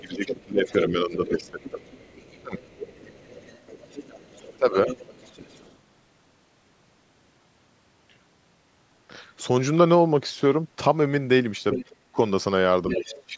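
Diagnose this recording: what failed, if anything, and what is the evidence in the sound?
Call processing, speech suppressed in double talk: the echo canceller likely mistook overlapping talk for echo, ducking speech about 10 to 30 dB at 0.0–1.82, 2.42–2.57, 4.59–4.88, 12.04–12.19 and 12.94–13.38 s.

Call processing, other side's voice leaking through: incomplete echo cancellation likely let far-end audio through, about 20 dB below speech at 0.14–5.77 and 12.89–13.23 s, about 10 dB at 11.72–11.94 s.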